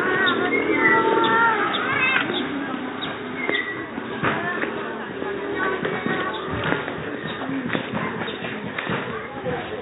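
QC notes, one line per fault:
No faults heard.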